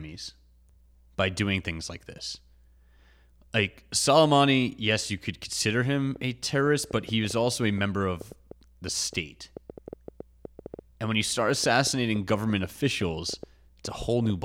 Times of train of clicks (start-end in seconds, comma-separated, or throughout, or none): 6.16-14.31